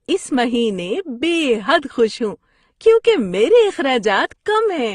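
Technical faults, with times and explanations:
Throughout: transcoding between lossy codecs. The speech carries two overlaid kinds of coding damage heard together, and the top end stops at 12 kHz. The likely cause is an AAC-LC encode followed by an Opus encode, both at rates that sound near 32 kbit/s, with the second codec spending bits on the first one's artefacts. A spectrogram shows a hard ceiling at 12 kHz.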